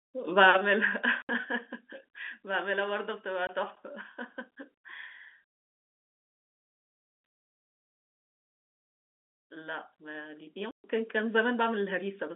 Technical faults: one channel drops out; packet loss filled with silence

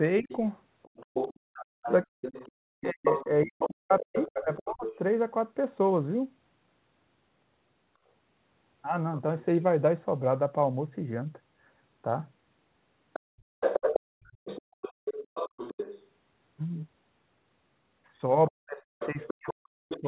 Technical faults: other side's voice leaking through; speech suppressed in double talk; background gated by the echo canceller

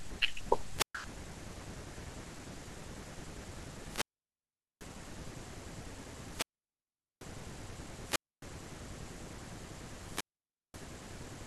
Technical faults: wireless microphone squelch dropout

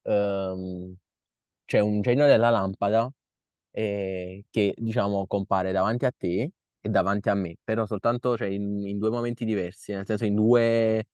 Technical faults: none

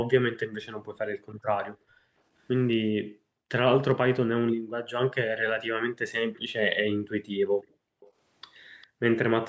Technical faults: background gated by the echo canceller; echo leak

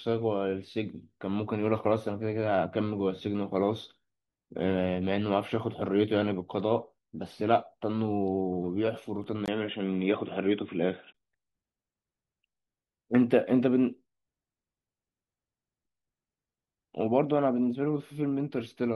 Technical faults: overlapping chunks; input switched to a poorer device

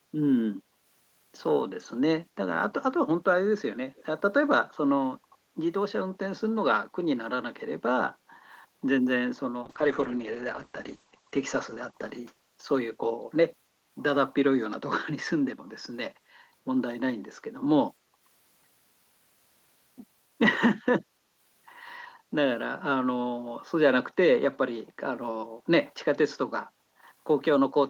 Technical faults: echo leak; call bitrate drop

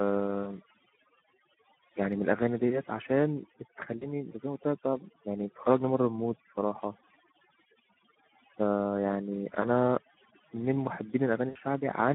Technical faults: overdone noise removal; Speex codec; VoIP packet loss concealed by the speech codec

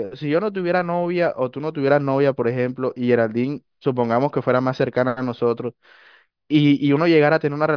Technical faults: none

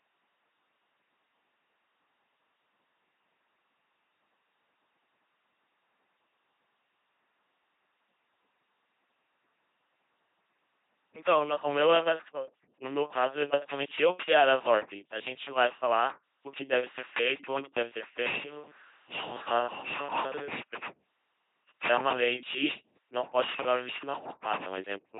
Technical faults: LPC-10 vocoder; switch to a distant microphone

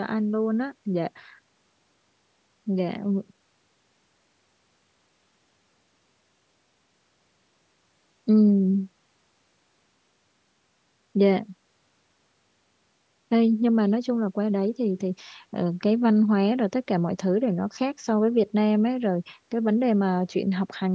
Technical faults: none

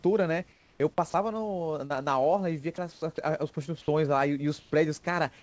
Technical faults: comfort noise in place of the background; sound dropped by the voice detector; short concealed packet loss

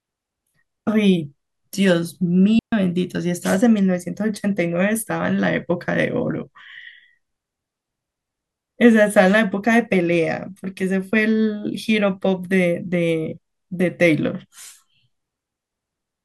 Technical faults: digital wireless dropout

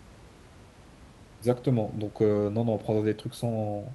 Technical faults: none

